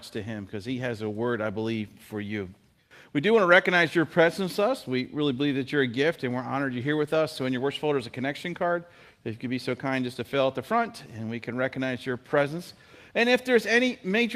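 No technical faults can be heard anywhere in the audio. Nothing in the sound calls for a time mark or a repair.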